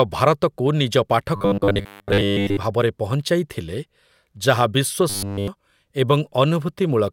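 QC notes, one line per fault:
1.36 to 2.59 s, right after "ଭାରତକୁ ନିଜ": robotic sound from repeated short buffers. Most of the speech becomes a rigid metallic buzz near 100 Hz. A 10 ms chunk is likely being replayed while fresh audio is skipped.
5.10 to 5.48 s: robotic sound from repeated short buffers. Here the speech is buzz throughout, again fixed at 100 Hz. The cause is likely the same starved playback, with a 10 ms piece repeated.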